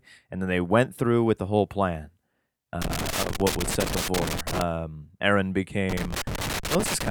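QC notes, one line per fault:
2.82–4.62 s and 5.90–7.11 s: loose connector crackle. Two irregular bursts of scratchy crackle break up the speech, the second running to the end of the clip. A worn or dirty contact in the signal path is making and breaking as it shifts, chopping the audio in rapid, uneven bursts. Any DC present on the line steps with each break, which adds sharp pops.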